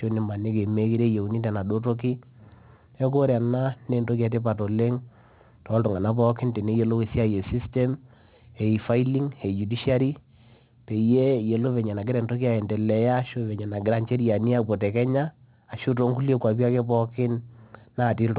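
Throughout the speech, sibilants sound gritty and metallic, with faint false tones roughly 30 dB down and energy pressed hard against 4 kHz. This is aliasing: the rate was lowered, which fits 8 kHz, without filtering first, so everything above 4 kHz folded back.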